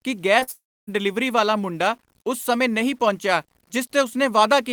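Throughout the speech, the samples appear to have been truncated to a coarse resolution without dither, most likely low bit depth without dither, which fits about 9 bits, leaving grainy distortion roughly 40 dB below the signal that grows rougher on quiet passages. At 0.39 to 0.43 s and again at 0.43 to 0.49 s, short concealed packet loss occurs: audio failed to reach the decoder, so it extended the preceding sound for about 20 ms and then 40 ms, producing a brief smeared wobble. From 0.51 to 0.89 s, a long network dropout is the likely cause of a gap in delivery. The receiver stretches the last sound into a fading buzz or hiss, then leaves silence for most of the stretch before the speech resumes, with 0.36 s of it gone.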